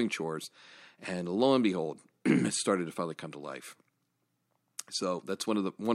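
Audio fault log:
No technical faults detected.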